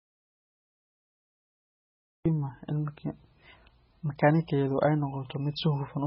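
From the very first moment until about 2.26 s there is nothing but silence, with no room tone or background hiss at all, and then the speech starts abruptly, already mid-flow. That is an audio dropout to silence, already in progress when the clip begins. The dead-flat gap likely means the input was lost while the recorder carried on writing silence, so whatever was said during that stretch is gone.

Once the speech arrives, it sounds dull, smeared and watery for the rest of the clip, with nothing at all above 5.6 kHz. The sibilants and airy consonants have lost their top end, and phrases have a warbly, swirling texture. That points to low-bitrate audio saved at a high bitrate. The sound fits a very low-bitrate MP3, around 16 kbit/s, that was likely re-encoded as a much larger 192 kbit/s MP3. The second encoding kept the damage intact and could not restore the missing highs.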